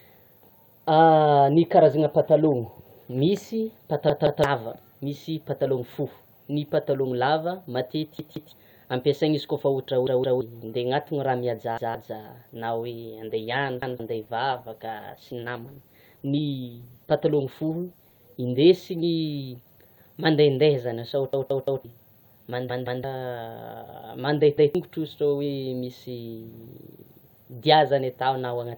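Repeated buffer faults at 4.10, 8.19, 10.07 and 11.78 s: fresh audio failed to arrive, so the device replayed its last block of about 171 ms, which fits an 8192-sample buffer. Each stretch of speech stutters two or three times with hard joins, and the audio that should have followed is lost.

From 13.25 to 19.97 s a call bitrate drop occurs: the bandwidth estimate fell and the encoder went from 64 to 17 kbps, staying at the lowest rate for about 5.2 s. The speech turns coarse, watery and muffled as high frequencies are cut, then clears.

The repeated buffer stutter recurs at 13.82 s, inside that dull stretch, and again at 21.33 s (the longest, sounding four times in a row), 22.70 s and 24.58 s.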